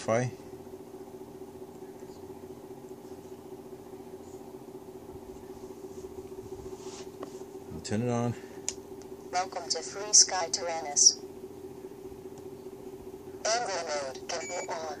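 Nothing goes wrong anywhere in the audio, so there's no fault to point to at any moment.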